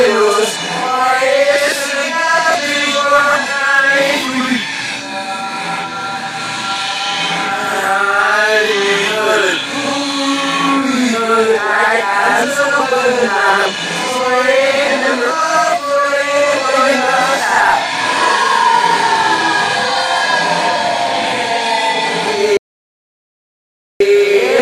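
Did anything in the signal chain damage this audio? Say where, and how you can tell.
Yes. There is an audio dropout to silence from 22.57 to 24.00 s. The sound cuts off mid-flow and returns about 1.43 s later. The gap is silent, with no room tone. That likely points to a lost input or link upstream, with the recorder writing silence.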